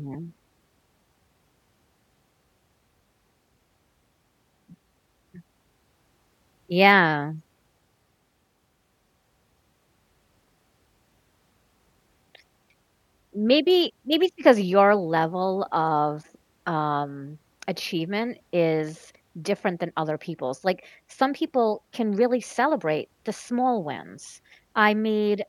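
Nothing technically wrong turns up anywhere in this speech recording, so there's no fault to time or trace back to a cause.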